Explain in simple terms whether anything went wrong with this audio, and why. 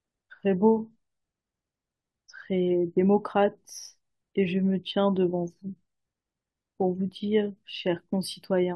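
Two small hiccups in the speech, both compressed frames skipped: around 2.31 to 2.36 s and 3.31 to 3.33 s, the playback jumps ahead, losing roughly 20 ms and then about 50 ms. Chunks of the compressed file went missing or got rejected, so the sound jumps ahead at each join.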